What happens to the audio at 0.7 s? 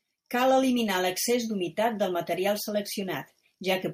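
Nothing goes wrong at 0.7 s: the speech carries on intact through that moment, with no dropout, click or distortion.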